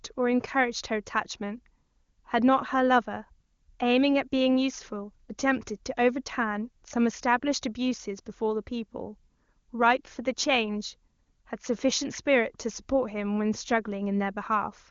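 No technical faults can be heard in this speech.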